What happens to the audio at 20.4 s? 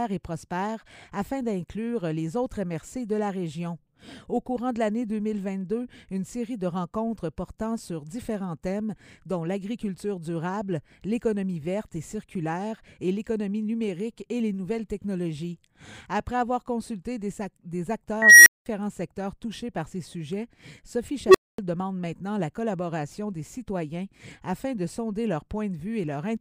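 Nothing goes wrong at 20.4 s: the audio plays through that moment intact, with no dropout, click, glitch or other fault.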